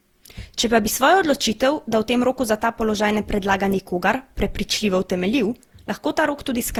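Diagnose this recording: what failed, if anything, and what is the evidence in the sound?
The codec stage failed: the speech is swirly, hollow and smeared throughout, with blurred consonant attacks. This is likely generation loss from around ten successive lossy encodes, fitting Opus near 64 kbit/s. Each pass requantises on a shifted frame grid, compounding noise. A spectrogram shows smeared onsets.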